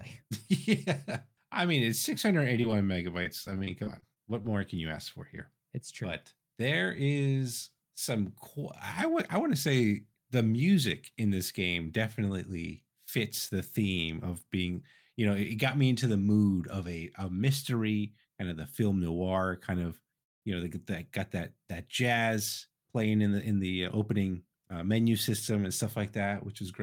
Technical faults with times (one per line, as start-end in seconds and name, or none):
2.61-4.46 repeated packet loss (robotic sound)
20.23-20.44 call audio freeze
25.30-25.85 jitter buffer speed-up